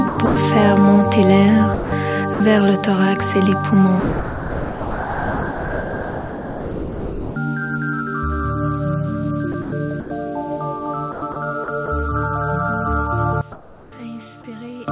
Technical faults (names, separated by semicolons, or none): sound chopped by the voice detector; sound dropped by the voice detector; one channel inverted; comfort noise in place of the background